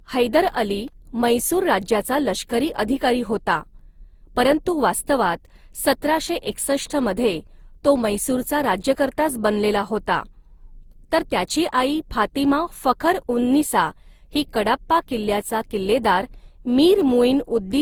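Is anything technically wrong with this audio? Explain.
Yes, generation loss throughout: the speech sounds swirly, hollow and smeared, with blurred attacks, likely from roughly seven passes through an Opus-like codec around 48 kbit/s.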